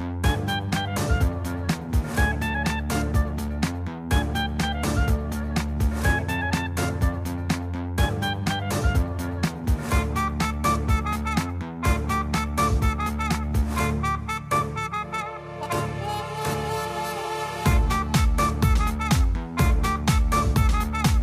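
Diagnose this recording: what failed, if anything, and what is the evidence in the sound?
Nothing in the recording points to a failure at any stage of the chain, from capture and conversion through transmission to playback, so no fault is diagnosed.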